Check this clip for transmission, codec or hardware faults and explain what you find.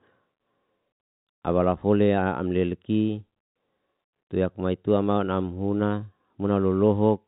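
Nothing in this speech recording points to a transmission, codec or hardware fault. The G.711 telephone coding can be heard in the band stopping near 3.8 kHz, which fits the 64 kbps mu-law format, with at most a faint level-following hiss beneath the signal.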